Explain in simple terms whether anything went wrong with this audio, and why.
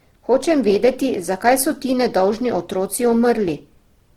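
Something did go wrong, and it lasts the whole clip. The speech sounds rough and grainy from start to finish. This is most likely Opus compression, squeezed hard to save space. The encoder keeps the overall loudness of each pitch region but runs short of detail. It fills the gaps with copied or noisy sound. That is why the speech turns gritty instead of muffled. The top end is still present.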